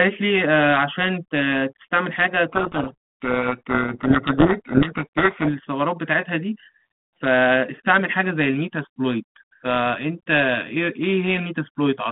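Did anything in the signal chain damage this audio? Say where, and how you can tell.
Yes, at the codec stage: from 2.49 s to 5.50 s there is a codec payload misread, where the receiver unpacks each G.726 code word with its bits in the reverse order from the sender. Every 4-bit difference value then lands as the wrong step, so the ADPCM predictor chases nonsense and the speech sinks under harsh, grinding distortion. The 32 kbit/s G.726 telephone band, about 150 Hz to 3.5 kHz, returns with only light codec damage once both ends agree again at 5.50 s.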